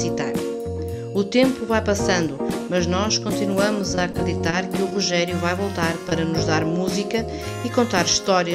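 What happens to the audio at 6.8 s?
Nothing goes wrong at 6.8 s; the audio plays through that moment intact, with no dropout, click or other fault.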